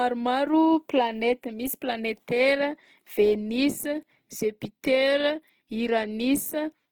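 From start to finish the speech has a grainy, rough texture, and its tonal parts turn noisy and hissy instead of swirling. This is likely Opus compression in its CELT music mode, at a bitrate that fits around 16 kbps. Bands the encoder cannot afford are refilled with folded or noise-like energy. On a spectrogram the upper bands look evenly speckled rather than holed, and content still extends to about 20.2 kHz.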